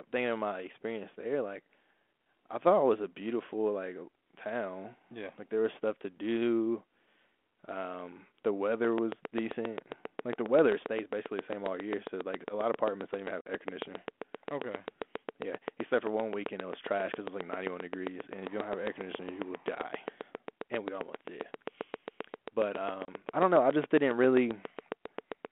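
From 8.85 s to 25.46 s a train of clicks runs at a regular 7.5 per second, roughly 150 in all, peaking well above the signal. The steady, much-alike ticks continue through pauses, which separates them from codec damage; nearby interfering equipment is the likely source.

Packet loss on an ADPCM call cuts hard holes at 13.41 s (50 ms, about five packets) and 23.05 s (30 ms, about three). It differs from a plain dropout because the sound returns briefly slightly distorted while the decoder's predictor resynchronises. Around all this, the 32 kbit/s G.726 telephone band of 250 Hz to 3.4 kHz is audible.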